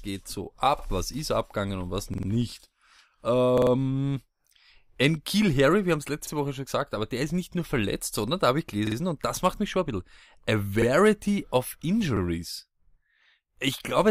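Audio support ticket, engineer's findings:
Repeated buffer, seven events: 0.79–0.84 s, 2.14–2.28 s, 3.58–3.72 s, 6.27–6.32 s, 8.87–8.96 s, 10.82–10.87 s, 12.17–12.21 s. The same 46 ms slice stutters with a hard join each time: one extra play mostly, three at 2.14 and 3.58 s, two at 8.87 s. That slice length fits a 2048-sample playback buffer. Probable component is the output device or driver underrunning and replaying its last block. It differs from a dropout because there is no silent gap, only duplicated audio before the sound resumes.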